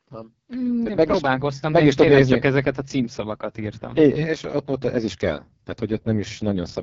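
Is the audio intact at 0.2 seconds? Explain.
No. At 0.2 s, as throughout, the speech carries AMR wideband (HD Voice) codec damage. Its rough, raspy texture fits the lowest 6.6 kbit/s mode, where a coarse pulse-driven vocal tract model replaces fine detail. A spectrogram shows smeared harmonics, a noise-filled band just under 7 kHz, and nothing above 7.5 kHz.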